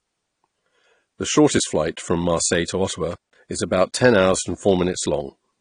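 A speech clip, dull and smeared from start to finish. Nothing is heard above about 10.1 kHz. The codec damage is plainly audible, with a watery, fizzy texture on sibilants. The likely cause is AAC compression, AAC-LC at a low bitrate. The band limit and artefacts fit about 32 kbps. From 3.12 to 3.37 s there is an intermittent contact. The sound drops out for about 173 ms, with crackle at each edge and faint hiss in the gap, just before "is about ten hours".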